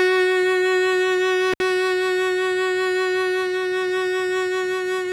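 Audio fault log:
1.52–1.62 s, intermittent contact: the music drops out for about 64 ms with crackle at both edges and faint hiss in the gap, like a loose plug briefly losing contact.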